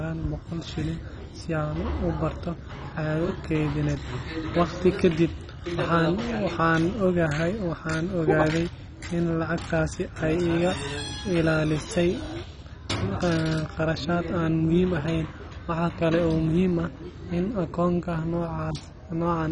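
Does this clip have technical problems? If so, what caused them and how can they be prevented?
Yes. Throughout the speech nothing sounds above about 10.3 kHz, and what remains is dull and gurgling. This is likely MP2 compression starved of bits, consistent with about 32 kbps: upper sub-bands switch off, and coarse quantisation adds a grain that a plain low-pass filter wouldn't. Encoding at a higher bitrate would prevent it.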